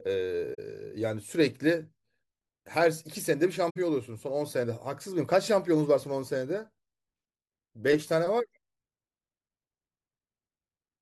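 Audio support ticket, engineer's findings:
AAC frame loss with muting, speech dropping into short soft-edged gaps at 0.54 to 0.59 s and 3.70 to 3.76 s, about 43 ms and 64 ms, which fits two and three lost frames. Decoder zeroed the missing spectra; window overlap fades the sound out and back in.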